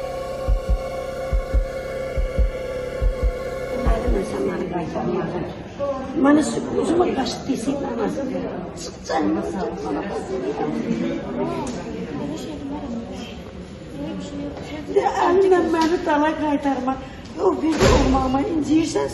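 From 3.92 s to 7.86 s, a train of clicks runs over the audio. The clicks come at an even pace, about 5.3 per second, some twenty in all. Each has much the same sharp shape. They peak at roughly the level of the sound itself and are heard as steady ticking, and they carry on through quiet moments too. The likely cause is interference from nearby equipment or a faulty connection or power supply.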